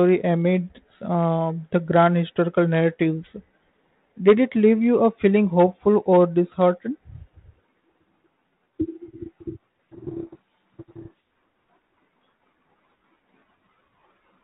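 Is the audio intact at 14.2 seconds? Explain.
Yes, the audio is intact at 14.2 seconds, with the speech passing through the 32 kbit/s G.726 ADPCM telephone path as expected and no fault at that moment.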